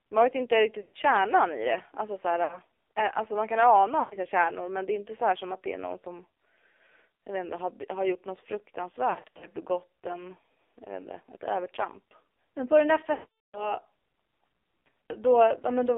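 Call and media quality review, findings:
AMR narrowband mobile codec, full length: band limited to roughly 300 Hz to 3.6 kHz, buzzy and synthetic. Pulse-driven vocal-tract model under heavy compression, which fits a low rate near 5.9 kbps. Spectrogram shows a hard ceiling at 3.6 kHz with nothing above.

Lost AMR speech frames at 0.82–0.97 s, 2.44–2.59 s, 4.00–4.17 s, 9.10–9.46 s (scattered, short gaps) and 13.14–13.81 s (longest). The decoder repeats the last good settings at falling gain, so the sound smears and fades. The spectrogram shows frozen, stretched harmonics, and the waveform tapers.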